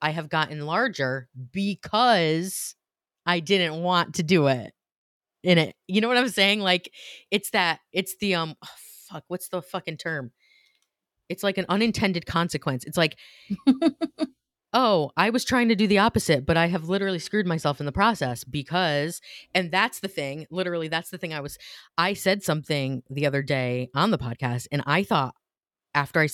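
No technical faults can be heard anywhere in this speech recording. There are no moments that call for a time mark.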